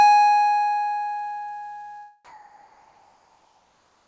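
From 2.25 s to the end of the music, the background is replaced by comfort noise: a steady, featureless hiss about 2 dB quieter, likely synthesised while transmission paused, above a call band that stops at 8 kHz. Unlike a gate's dead silence, noise continues, but without any texture.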